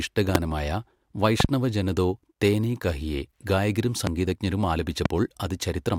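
A loud pop hits the speech at 0.35 to 0.38 s, standing some 25 dB above it. A double pop follows at 1.40 to 1.47 s, just before "ജന തോ തേനേ കഹിയേ". Another comes at 4.07 to 4.09 s, right after "തോ തേനേ കഹിയേ ഗായകരും", and a last one at 5.06 to 5.08 s. These later pops peak around 20 dB above the speech. Each is a sharp thump, and the speech carries on underneath. The likely cause is a sudden voltage pulse, such as a plug, a switch, static or a driver glitch, added to the signal.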